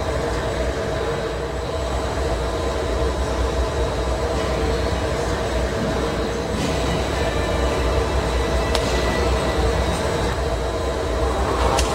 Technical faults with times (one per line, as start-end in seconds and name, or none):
none